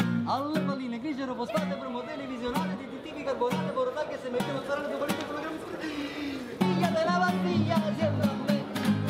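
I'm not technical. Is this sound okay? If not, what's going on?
Yes, this sound is okay. Nothing in it points to a technical problem worth worrying about.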